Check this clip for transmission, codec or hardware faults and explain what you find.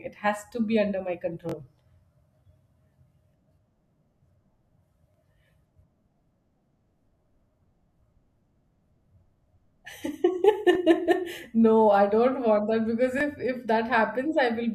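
The speech has five repeated-buffer faults: 1.49–1.54 s just after "to be under my", 3.09–3.12 s, 5.12–5.14 s, 10.73–10.75 s and 13.18–13.21 s just after "that because". When fresh audio arrived late, the device replayed its last 21.33 ms block, which fits a 1024-sample buffer. The first block plays three times, the others twice, so each is a brief buzzy stutter with hard joins. Unlike a dropout, there's no gap of silence; the same fragment recurs.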